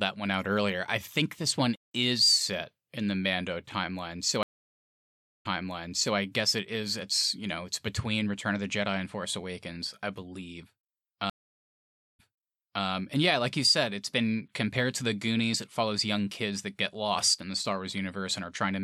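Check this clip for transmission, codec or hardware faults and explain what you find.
Two stream reconnects break up this speech. At 4.43 s, right after "timeline so", the audio drops out for just under a second and comes back at 6.15 s on "I guess it is", replaying about 0.73 s it already played. The same happens at 11.30 s after "I believe": about 0.84 s of silence, then it picks up at 12.84 s with "and yeah like you", about 0.71 s early. Each time the connection dropped, the player reconnected with a fresh decoder, and the server resent a chunk of already-played audio.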